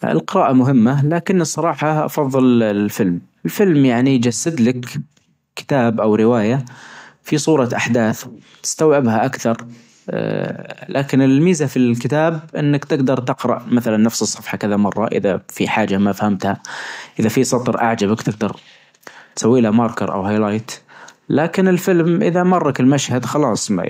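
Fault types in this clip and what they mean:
No technical faults can be heard in this speech recording, and the signal stays steady and intact throughout.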